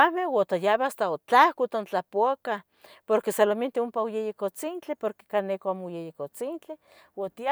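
A speech recording with no technical faults to report.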